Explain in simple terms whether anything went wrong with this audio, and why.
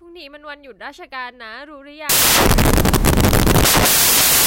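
From 2.09 s to the end, the speech turns into loud hiss. These are samples built from the wrong bytes: each sample's bytes were combined incorrectly, making noise.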